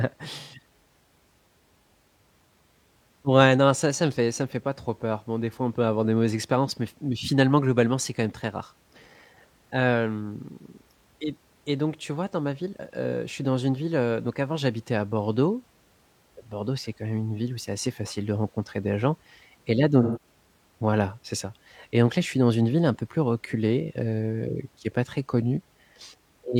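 AAC frame loss with concealment appears at 0.39 to 0.59 s and again at 20.02 to 20.21 s, between "gens et là donc" and "voilà c'est ça et". Each time about 128 ms of coded audio went missing, which fits three lost AAC frames. The decoder bridged each gap by rebuilding sound from the last good spectrum. Both short patches come out as a smeared, noisy or phasey blur in place of clean speech.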